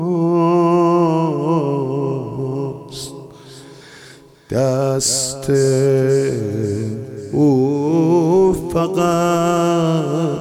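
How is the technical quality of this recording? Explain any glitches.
No technical faults or glitches are audible anywhere.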